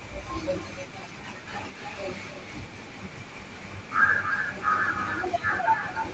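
Likely an echo canceller failing to remove its loudspeaker's pickup, an echo leak returns a copy of the speech 292 ms late at 0.00–0.13, 0.58–0.96, 1.76–2.00, 4.21–4.59 and 4.89–6.13 s. It starts faint, then grows until it matches the speech.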